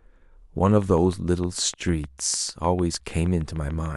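From 0.82 s to 3.87 s a steady ticking runs over the speech, a regular train of clicks at about 6.6 per second, some twenty in all. Each click has much the same sharp shape and peaks a few decibels above the speech, so it cuts through both the words and the gaps between them. The even spacing suggests a repeating pulse, most likely interference from nearby equipment or a faulty connection or power supply.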